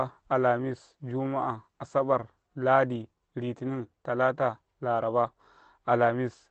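A lost packet rebuilt from error correction occurs at 1.41 s in this speech. One 20 ms packet went missing in transit, but the packet after it carried a reduced-quality duplicate through Opus in-band forward error correction. The decoder played that duplicate, so there is no dropout. Instead that brief frame sounds rougher and grainier than the audio around it, a smear of coding noise. The call path's Opus coding caps the audio at about 8 kHz, consistent with a moderate bitrate of around 24 kbps.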